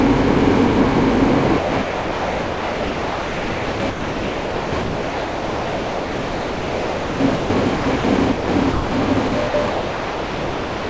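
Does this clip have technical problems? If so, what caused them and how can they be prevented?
Yes. The sound is chopped by the voice detector from 1.58 to 7.50 s, 7.76 to 8.04 s, and 8.32 to 10.90 s. About 5.5 s, 0.18 s and 1.7 s are replaced by comfort noise. The likely cause is a sender voice detector misjudging this non-speech sound as silence. Disabling discontinuous transmission for non-speech audio prevents it.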